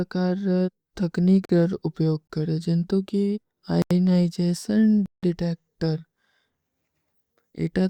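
At 1.45 s the speech drops into a block of digital silence for about 43 ms, cutting out and back with no fade. That's likely the output buffer going unfilled, and the length fits a 2048-sample block. At 2.27 to 2.30 s there's a gap between stream segments: a hard-edged 24 ms hole where two segments' timestamps don't quite meet and the player pads with silence. Nothing is lost, just delayed. The dropouts then get longer, each double the last: about 85 ms at 3.82 s and about 171 ms at 5.06 s, which fits 4096- and 8192-sample blocks.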